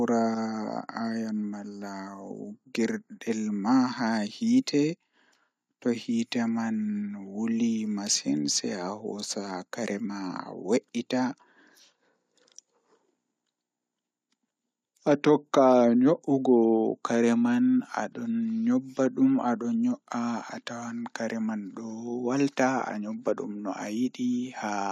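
No technical faults can be heard in the recording. Nothing interrupts or alters the speech at any point.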